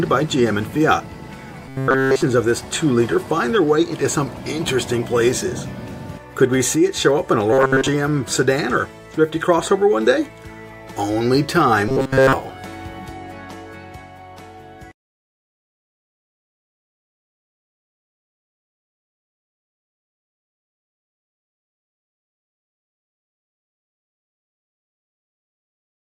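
Robotic sound from repeated short buffers turns the audio into a fixed metallic buzz near 133 Hz at 1.69 to 2.23 s, 7.53 to 7.88 s (mostly repeats) and 11.88 to 12.33 s, likely from a 7.5 ms fragment looping while fresh audio stalls. Spectrograms show rigid 133 Hz harmonic stripes, and waveforms show identical repeating cycles.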